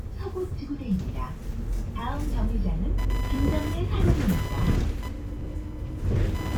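From 2.98 s to the end at 6.57 s, computer activity noise appears. A buzzing chirp pulses at roughly 1 kHz, about 15 dB below the sounds. Processor or graphics load is shifting the shared ground of the audio circuit. The buzz follows that activity, not the sounds.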